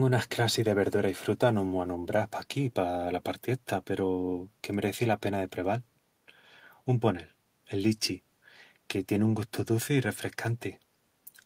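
No technical faults are audible.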